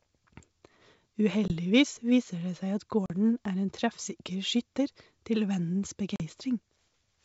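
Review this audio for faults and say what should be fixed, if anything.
Three packet-loss dropouts on what sounds like an ADPCM call, with the G.722 wideband coding holding up clean, which fits its full 64 kbit/s mode. The holes fall at 1.48 to 1.52 s (about 20 ms, roughly one packet), 3.06 to 3.11 s right after "seg at" (about 40 ms, a couple of packets), and 6.16 to 6.22 s (about 40 ms again). Each is a hard-edged patch of silence, and since ADPCM only sends differences, the decoder's predictor and step size drift away from the sender's. The speech comes back with slight roughness before it settles a few tens of milliseconds later. To prevent this, add packet-loss concealment plus a jitter buffer or redundancy on the link so lost frames get filled and the decoder state stays in step.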